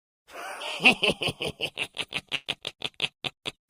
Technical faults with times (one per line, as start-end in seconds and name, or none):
2.35-2.47 burst of packet loss